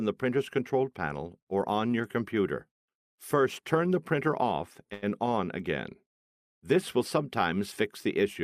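At 4.93 s a packet arrived late, leaving the jitter buffer with nothing to play, so there is a short stall from a late packet. Rather than skip ahead, the receiver kept extending the last bit of sound for about 89 ms until the packet turned up at 5.04 s, then resumed exactly where it had stopped. Nothing is lost, but everything after it now plays 89 ms later, and the sound there is held unnaturally long with a faint buzzy, slightly dipped quality.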